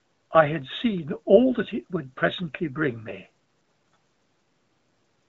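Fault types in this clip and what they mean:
No faults found in the speech; the faint room noise sits about 51 dB below it.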